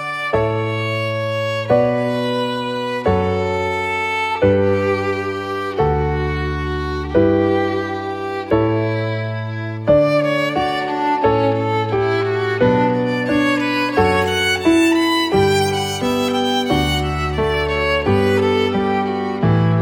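At 11.94 s there's one sharp click, a thin spike across the spectrum, likely dropped samples: about a single sample went missing, so the waveform jumps.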